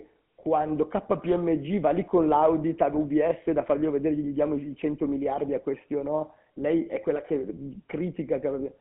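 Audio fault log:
Throughout, GSM full-rate codec: speech is held to 150 Hz to 3.4 kHz and carries a plainly audible buzzy, gravelly roughness from a vocal-tract model driven by sparse, regularly spaced pulses, which fits 13 kbps full rate. Plain band-limiting would sound dull but clean.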